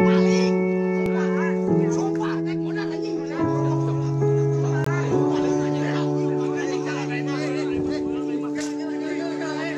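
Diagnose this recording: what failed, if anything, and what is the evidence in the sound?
A short hole at about 4.84 s: the audio drops to digital silence for roughly 20 ms and returns with no fade. This block of digital silence points to the driver or buffer stage, where an output buffer went unfilled in time and was zeroed.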